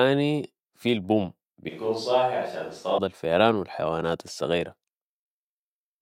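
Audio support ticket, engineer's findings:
Speech turns roomy and hollow, 1.69–2.98 s. Bass thins, level drops roughly 5 dB, room noise more audible. Abrupt cut in and out. Likely switch to a distant microphone, close-mic signal lost, farther pickup filling in.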